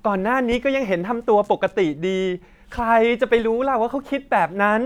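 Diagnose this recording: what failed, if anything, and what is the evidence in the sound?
Nothing failed: no stage in the chain, from capture through playback, leaves an audible mark on this speech recording.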